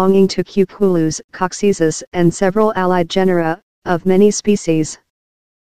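Hard clipping affects the audio from 2.46 to 2.92 s, where the signal runs about 1 dB past what the stage can pass, so the highest peaks are sliced flat. At that mild overload it is heard as a brief crackle on the loudest moments rather than sustained fuzz. On a waveform the peaks in that stretch sit squared off, and a spectrogram shows vertical bands of added harmonics reaching high into the spectrum.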